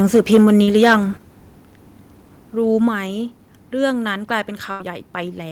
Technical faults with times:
0.00-0.95 microphone overload
0.63-0.70 short concealed packet loss
1.17 microphone volume stepped down
2.88 microphone volume stepped down
4.71-4.83 burst of packet loss

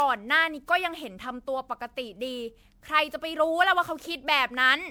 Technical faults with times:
0.00-4.91 generation loss

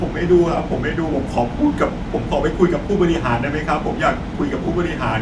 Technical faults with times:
none

